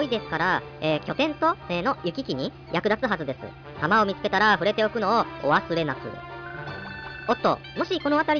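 No technical faults can be heard anywhere in the clip. The audio runs without any break, dropout or distortion from its first moment to its last.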